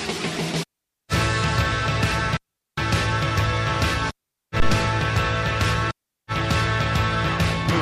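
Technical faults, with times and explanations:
4.60–4.79 s: phantom power thump, a deep knock peaking at about -9 dBFS and decaying over 42 ms as a supply switching step passes the coupling capacitors.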